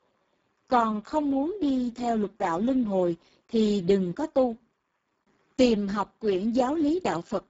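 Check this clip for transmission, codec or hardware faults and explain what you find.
One codec fault runs through the whole speech clip.

Speex codec, throughout: the speech has been through Speex at a very low quality setting, with heavy damage that points to roughly 6 kbps. At that rate the CELP coder has too few bits to model the excitation, so the pulse-like detail of the voice is replaced by a coarse approximation. The result sounds hoarse and noisy. Nothing is present above 7.7 kHz, and the upper band is a noise-like fill rather than real detail.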